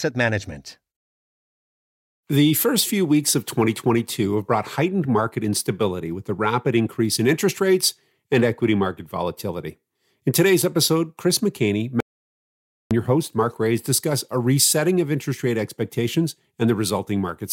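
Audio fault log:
12.00–12.91 s, audio dropout to silence: the input feed was likely cut off for a moment, through a dropped device link or a brief mute, while the recorder kept writing silence. The speech stops abruptly and the next 0.91 s is silent, with no room tone or hiss beneath it. The signal then snaps back in mid-flow just ahead of "your host", and whatever was spoken in that gap is missing from the recording.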